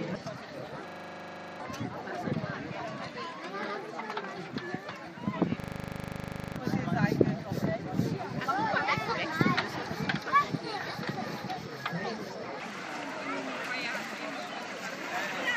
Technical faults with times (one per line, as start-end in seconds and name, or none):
0.88-1.60 system hang loop
5.60-6.56 system hang loop